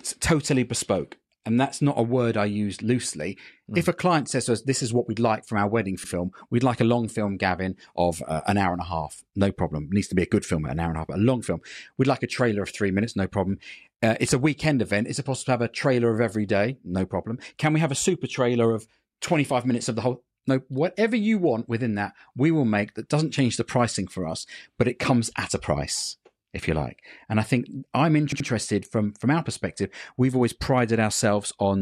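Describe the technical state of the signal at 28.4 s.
At 28.32–28.48 s, repeated frames: a 78.4 ms block of compressed speech data was delivered more than once, and the decoder played it twice more. The result is a brief stutter that repeats the same fragment and stretches the audio by 156.7 ms.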